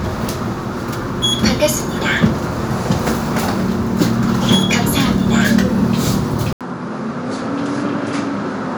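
A recording of sounds, with one fault near the end. At 6.53 s the audio drops out for about 80 ms. When it returns, it runs to the end of the clip with nothing above 10.5 kHz. It sounds duller and a few decibels quieter. A new background noise sits far below the signal, roughly 55 dB down. This is likely an input switched to a poorer device partway through the recording. The new input has a narrower band, a lower level and its own noise.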